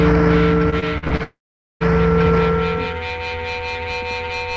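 From 0.70 to 1.21 s the sound turns choppy and robotic, with six short holes up to 45 ms. This is repeated packet loss: about 30% of the stretch is patched by stretching the previous sound. From 1.23 to 1.82 s a fading buzz gives way to roughly half a second of silence before the audio resumes with part missing, likely a long network dropout.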